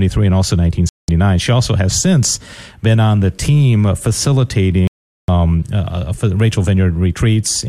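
At 0.89 s the sound cuts abruptly to silence for about 0.2 s, returning at 1.09 s, and a longer hole follows from 4.87 s to 5.29 s, about 0.41 s. These are digital broadcast dropouts: the receiver lost valid frames and muted until clean ones arrived. Both gaps fit whole 24 ms frames being discarded. Unlike a packet-loss concealment glitch, nothing is smeared or repeated; the missing material simply never plays.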